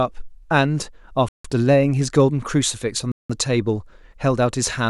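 Speech cuts to dead silence at 1.29–1.45 s and 3.12–3.30 s, shown as flat waveform gaps and blank spectrogram columns: a Bluetooth stall, likely from interference emptying the headphone buffer.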